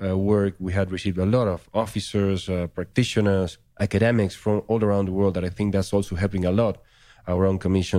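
Nothing technical to flag here: the speech comes across without any audible faults anywhere in the recording.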